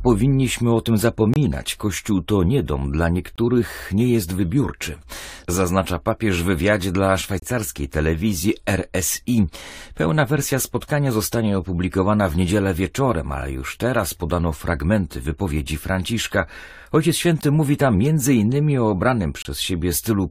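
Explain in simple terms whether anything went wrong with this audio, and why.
Short hard-edged silences cut into the speech at 1.34–1.36, 3.36–3.38, 7.40–7.42, 13.41, 17.41 and 19.42–19.45 s. This is a gap between stream segments: joins between chunks, spaced like 2-second segments, leave 4 to 28 ms of added silence.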